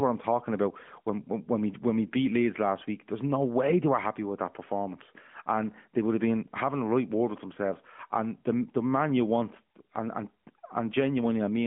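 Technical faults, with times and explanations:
Nothing stood out on listening to this speech, which comes through the narrowband mobile codec at 12.2 kbps with its telephone band of 150 Hz to 3.4 kHz.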